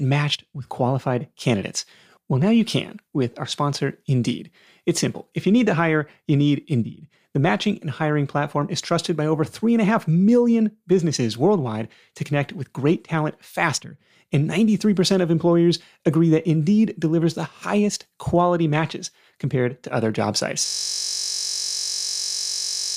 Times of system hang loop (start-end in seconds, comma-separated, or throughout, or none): 20.66-22.97